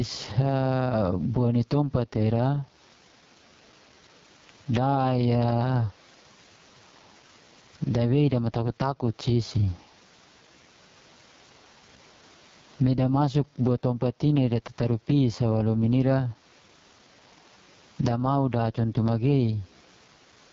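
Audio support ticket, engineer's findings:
Gain pumping, throughout the clip. Level ducks under each loud syllable, a swing of around 15 dB. Room noise, about 44 dB below speech. Likely cause: mic gain set far too high with a fast limiter clamping each peak, squashing the dynamics.

AMR wideband (HD Voice) codec, throughout. Speech rough and raspy, nothing above 7.5 kHz, top band hissy rather than detailed. Consistent with AMR-WB running at its bottom rate, fitting 6.6 kbit/s. Pulse-excited vocal tract model too coarse at that rate. Heavy codec damage.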